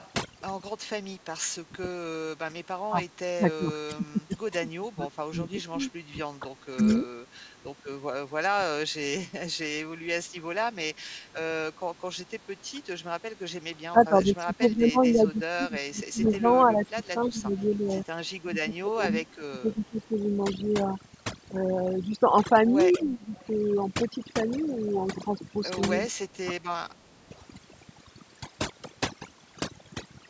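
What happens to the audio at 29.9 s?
At 29.9 s the speech sits over near-silent gaps flecked by twinkling specks. That's overdone noise removal, present throughout the clip: frequency bands near the estimated noise floor are cut almost to nothing, taking quiet parts of the voice along with them.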